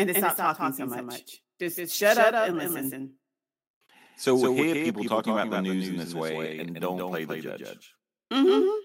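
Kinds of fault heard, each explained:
Doubled audio track: the speech plays twice, a dry copy trailing about 150 ms behind, some 5 dB quieter. Likely a slower second capture path.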